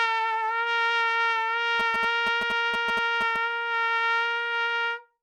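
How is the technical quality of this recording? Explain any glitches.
The recording has one fault: GSM signalling bursts from 1.80 to 3.37 s. A nearby 2G phone sends short clusters of radio bursts while signalling, and the audio circuitry rectifies them into a galloping pattern of ticks and 217 Hz buzzes, roughly 10 dB below the sound.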